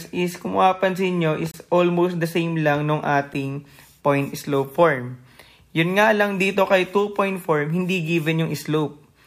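A short hole opens at 1.51 to 1.54 s, about 28 ms long, then a single tick at 3.34 s, lasting 10 ms. Both are blocks of digital silence: samples replaced by zeros with no fade, which fits an output buffer not filled in time.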